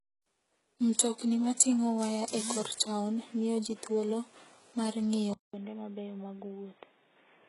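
It's a short speech clip, and the whole thing has that smeared, synthetic top end you get from HE-AAC compression, likely at a very low bitrate, something in the region of 12 kbps. Nothing gets through above 11.1 kHz, and what's there up top has been rebuilt by copying lower bands upward rather than coded properly, so the s sounds come out gritty and a bit lispy, with harmonics that don't line up across the crossover. Then at 5.34 s there's a gap of about 200 ms, and from there to the end the sound is noticeably duller and boxier, with nothing above 3.7 kHz. The level drops by roughly 10 dB, and there's a new low noise floor sitting well under the signal. That's the input switched to a poorer device, likely a different mic or a headset dropping into its narrowband call profile.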